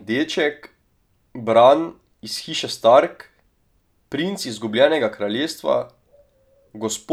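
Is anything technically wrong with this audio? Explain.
No, nothing in this speech recording stood out as technically wrong on listening.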